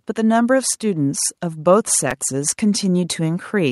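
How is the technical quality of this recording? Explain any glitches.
The recording has two technical faults: a steady rise in level across nearly the whole clip, and one brief glitch in the middle.

From 0.14 s to the end, the speech and the background noise swell together, growing steadily louder rather than holding a constant level. This is automatic gain rising: the automatic gain control judged the input too quiet and kept raising its gain. Because it scales the whole signal, the noise floor climbs in step with the speech.

At 2.11 s there is a short click. This is a repeated buffer. New audio did not arrive in time, so the device replayed the last block twice more, about 5 ms each time, which fits a 256-sample buffer. The hard joins between the identical copies produce the click, and essentially none of the audio is lost.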